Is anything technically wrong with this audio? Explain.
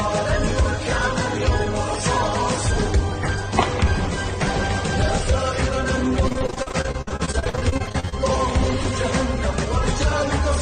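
Yes. From 6.28 to 8.14 s there is repeated packet loss (robotic sound). Short holes of up to 52 ms keep recurring, each patched by extending the previous sound, so about 38% of that stretch is filler. It sounds choppy, and unlike a single dropout the breaks come in a rapid, continuous run.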